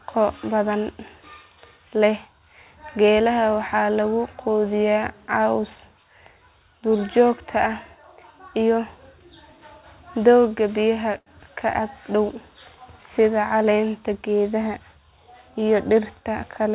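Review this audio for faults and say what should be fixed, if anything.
Short stall from a late packet, 11.18 to 11.29 s, between "doogga biyaha" and "ka ag": a packet arrived late, the jitter buffer ran dry, and the receiver stretched the last sound for about 83 ms before resuming where it stopped. Nothing is lost, but that sound lingers with a slight buzz or dip. To prevent it, keep a slightly deeper jitter buffer or improve network timing so packets reach the receiver before they are needed.

Jitter buffer speed-up, 14.15 to 14.80 s: the buffer held more audio than it aims for, as happens when delayed packets arrive together, so the receiver cut short pitch-period pieces, about a tenth of a second in total. The speech runs at 111% speed with unchanged pitch and sounds briefly rushed. To prevent it, reduce packet bunching on the network path so the buffer seldom overfills and needs to catch up.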